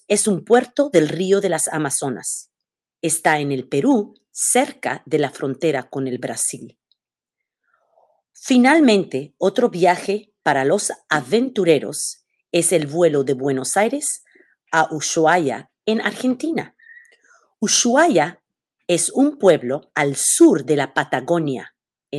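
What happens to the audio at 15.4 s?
Nothing goes wrong at 15.4 s: the sound passes through intact, carrying only the ordinary coding character of the call path it travelled through.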